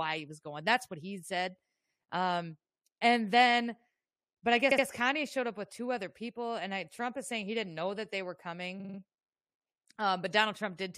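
A stutter follows "but I" at 4.70 s, where a 70 ms slice plays twice more, and again after "know that they were" at 8.79 s, where a 46 ms slice repeats four times. These are repeated frames: the same compressed blocks were decoded again, adding about 0.14 s and 0.19 s.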